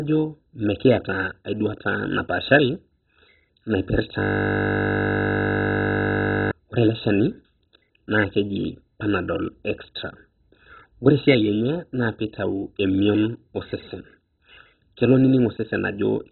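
Throughout, the speech sounds dull and gurgling, with nothing above 4 kHz, likely heavy MP2 compression at a very low bitrate, around 16 kbps, starving upper sub-bands. From 4.20 to 6.51 s a steady 50 Hz buzz replaces the speech: a system hang loop, repeating one 20 ms piece over a hundred times while the hardware kept cycling its buffer.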